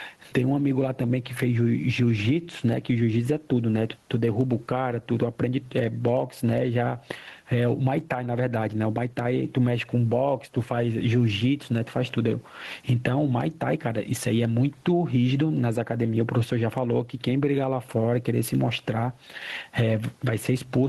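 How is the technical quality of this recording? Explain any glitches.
The recording has one technical fault, gain pumping, which runs the whole length of the speech. The room noise sits about 44 dB below the speech. The gain swings by around 10 dB, dropping as soon as the talker speaks again. The likely cause is a microphone gain set far too high, with a fast limiter or compressor clamping down on each loud syllable and releasing in the gaps. The level recovers gradually, so the noise breathes up and down without cutting off, which separates it from a noise gate. The speech also sounds squashed, with loud and soft passages pressed close together.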